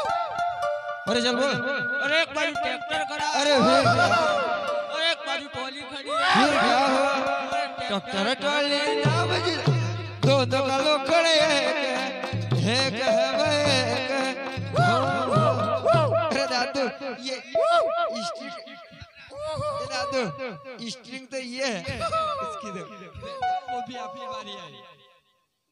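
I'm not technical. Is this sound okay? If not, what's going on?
No. From 0.46 to 2.27 s a 1.4 kHz tone swells over about a second and a half into a shrill whistle: loudspeaker feedback squeal, a microphone picking up its own loudspeaker.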